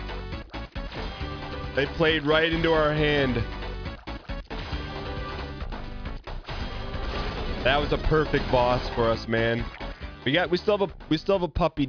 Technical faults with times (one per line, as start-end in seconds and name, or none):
none